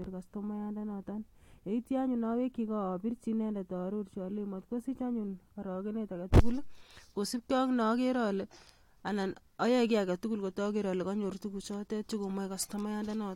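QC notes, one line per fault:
No faults detected.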